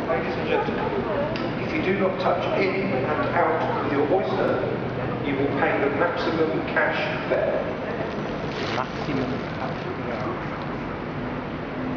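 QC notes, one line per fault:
4.48–4.53 s and 9.53–9.58 s, overlapping chunks: at both spots a 50 ms sliver of audio plays twice, so you get a quick stutter at the seam. The joins fall about 5 s apart, which tells you the audio was handled in 5 s blocks and each new block started 50 ms before the previous one had finished. That tail gets replayed at every boundary.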